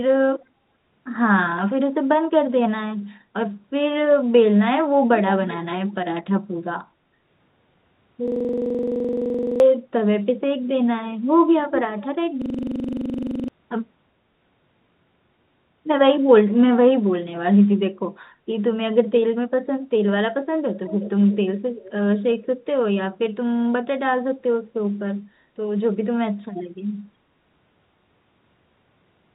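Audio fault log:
5.88–5.94 s, 11.99–12.06 s, 20.74–21.11 s, 21.3–21.36 s, 21.77–21.92 s: echo leak. A faint delayed copy of the speech comes back about 0.36 to 0.37 s late. It starts near about -35 dB below the speech and grows to about -20 dB by 21 s. The likely cause is a far-end speakerphone whose echo canceller let some of its own pickup through.
8.28–9.60 s and 12.42–13.48 s: system hang loop. One 42.67 ms slice repeats exactly, 31 times and then 25 times, at 23.4 Hz. This gives a rough, buzzy stutter, which fits a 2048-sample buffer cycling while the system froze. Roughly 1.5 s and 1 s of speech are lost.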